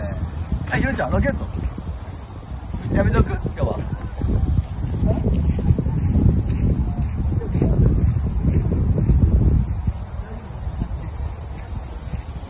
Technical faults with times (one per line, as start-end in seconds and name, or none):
none